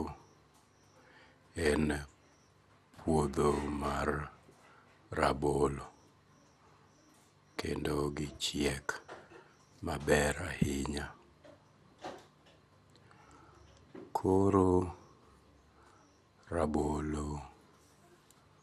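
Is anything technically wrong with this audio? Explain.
Yes. Generation loss runs throughout this speech. It was likely re-encoded about four times, consistent with MP2 near 96 kbit/s. It sounds swirly and hollow, with blurred attacks and nothing above 16.5 kHz.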